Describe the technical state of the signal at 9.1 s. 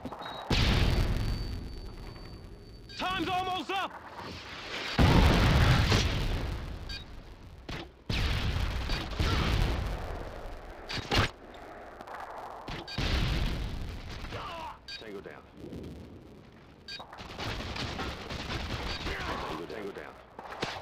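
At 9.1 s the filter is restarted on every block, as it is through the whole clip. The filter loses its state at each block boundary and starts from silence. Each block opens with a small transient. These repeat at 172 Hz, which fits a 256-sample block. The result is a buzz that rises and falls with the level of the sound.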